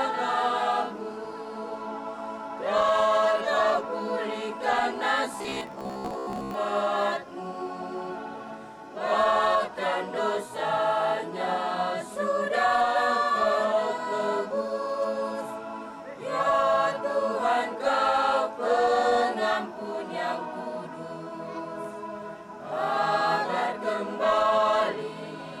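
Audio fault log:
5.33–6.54 s, robotic sound from repeated short buffers: for about 1.2 s the audio collapses into a rigid, metallic buzz near 66.7 Hz that still loosely traces the original contour, most likely because new audio arrived too seldom and the last 15 ms fragment was looped over and over while most of the real material was skipped. Unlike a stutter or dropout, the result is a rigid buzz that only roughly follows the sound.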